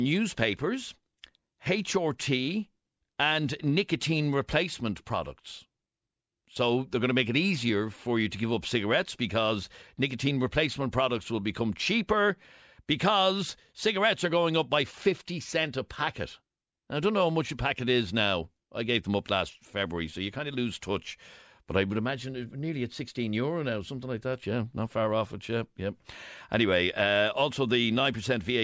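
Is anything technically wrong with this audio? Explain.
No, nothing is technically wrong with this speech recording. No problem in recording, processing or playback can be heard anywhere in it.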